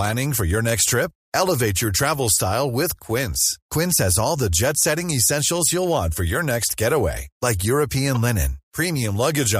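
Damaged data in the compressed speech stream makes the decoder misread the affected frames, lose sync and hunt for the next valid frame header. Each time this happens it leaves a brief chirp or blip, once at 5.09 s and again from 8.15 to 8.17 s.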